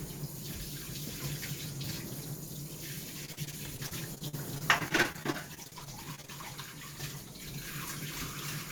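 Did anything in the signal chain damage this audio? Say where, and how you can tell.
Yes, there is repeated packet loss (robotic sound) from 3.25 to 6.30 s, introduced at the network stage. Across those three seconds the sound turns choppy, breaking up into a rapid run of short holes, none longer than about 45 ms. The receiver patched each one by stretching the last good sound, about 615 ms of fill in all, roughly a fifth of the stretch, while around 500 ms simply vanished. That repeated fill is what makes it sound robotic.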